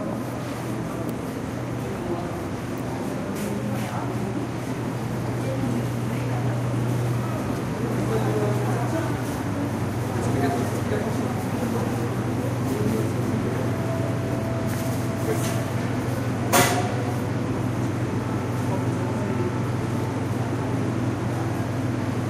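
Nothing in this recording of everyday sounds stood out as a technical fault on listening.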